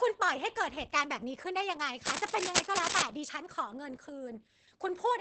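Opus voice compression runs through the whole clip. The speech has been coded by the low-rate linear-prediction part of the codec, with nothing above 8.5 kHz. Within that band the excitation is coded coarsely, so the voice sounds muffled and hoarse with a faintly robotic edge. The damage is heavy and points to a bitrate of around 10 kbps.

Cable scratch noise sits from 2.05 to 3.03 s, a burst of dense, uneven scratching and rustling about as loud as the speech itself. The likely cause is a worn cable, connector or control being moved, which makes its contact resistance jump rapidly and injects ragged noise into the signal for just under a second.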